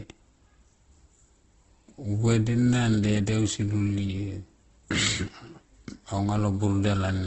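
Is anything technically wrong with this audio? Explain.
Yes, the whole clip carries heavy coding damage, likely from Opus compression. Nothing reaches above about 8.1 kHz, so the speech sounds band-limited and a bit dull. The encoder keeps each band's energy but runs short of bits, so it fills bands with folded lower content or noise. That makes the speech grainy, rough and noisy rather than swirly. The texture points to Opus's music mode at a very low bitrate, somewhere around 12 kbps.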